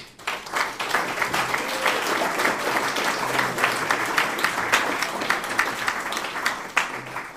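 At 0.46 s the sound jumps abruptly forward, and for about 30 ms, until 0.49 s, there is a short disturbance instead of clean audio. This is the signature of a broken MP3 bit reservoir, likely caused by frames missing from the stream. With the frames gone, the next frame reaches back for borrowed data that is no longer there and decodes foreign bytes. The disturbance spans roughly one 26.1 ms frame before normal decoding resumes.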